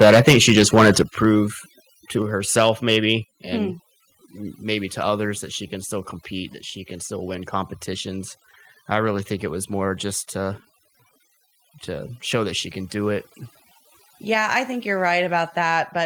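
Heavy-handed noise removal runs through the whole speech clip, so the background sits near silent with twinkly specks. From 0 to 1.25 s there's microphone overload: peaks land about 12 dB past the limit with a fair chunk of them flattened, giving a harsh crackle, likely from input gain set too high. At 1.02 s the microphone volume steps down by about 6 dB, and again at 2.22 s by about 4 dB. Voice and background drop together each time, likely the call software pulling the input level back after the distortion. A milder overload returns from 2.57 to 2.96 s, about 4 dB over with only a few peaks clipped.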